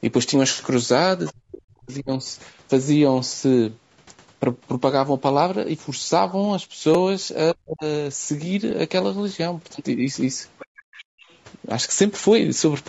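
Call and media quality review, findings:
Low-delay AAC compression, throughout: rough, grainy speech with noise between harmonics and a synthetic top band, plainly audible, likely AAC-ELD at a bitrate near 32 kbps. Short frames resolve pitch poorly. This is constant, unlike the event faults below.

Other side's voice leaking through at 1.26–1.33 s and 10.59–11.05 s, about 20 dB below the talker, and at 11.23–11.38 s, about 35 dB below. A second voice is present. The echo canceller likely left residual loudspeaker signal in the mic.

Speech suppressed in double talk at 1.32–2.25 s (roughly 0.7 s affected), 7.53–7.85 s and 11.05–11.13 s. The talker drops by around 40 dB while both sides speak. This likely comes from the canceller turning down its own talker. The room sound isn't what drops.

Repeated buffer at 6.94 s (two extra plays) and 8.71 s (one extra play). These are tiny click-buzz stutters with hard joins, which fits a buffer of about 5 ms. 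No audio is lost. They are distinct from suppression: a repeat, not a level drop.

Background gated by the echo canceller at 10.73–10.77 s: the room sound dips by about 31 dB for 40 ms during loudspeaker playback, then returns. It is separate from double-talk suppression because the ambience drops, not the talker. Nothing is present above 8 kHz, which matches the call microphone path.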